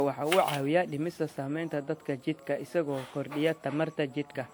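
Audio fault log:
Throughout: generation loss. The speech sounds swirly, smeared and hollow, with soft, blurred attacks despite content reaching 20.1 kHz. This is likely from roughly seven lossy re-encodes, each requantising on a shifted frame grid; the character fits a WMA chain at 128 kbit/s.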